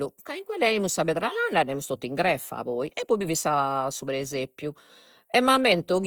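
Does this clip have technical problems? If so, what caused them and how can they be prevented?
Yes. Throughout, the speech sounds grainy and rough, with tonal parts smeared into noise. This is likely Opus compression in CELT music mode filling bands when bits run short, consistent with roughly 24 kbps. Encoding at a higher bitrate would prevent it.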